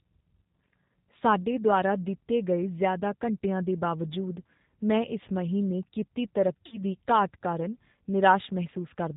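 G.729 coding runs through the whole speech recording: the 8 kbit/s codec rebuilds each 10 ms frame from a vocal tract filter, a pitch predictor and a few pulses, so nothing above 4 kHz survives and the voice has a plainly audible rough, synthetic edge. VoIP packet loss concealed by the speech codec appears from 6.66 to 6.78 s. About 60 ms of audio went missing, which fits three lost packets, and the decoder stretched its last pitch and filter into a fading buzzy tone or coloured noise, leaving the voice weak or distorted until recovery.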